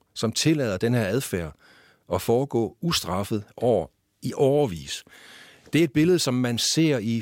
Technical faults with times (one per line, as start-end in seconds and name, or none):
none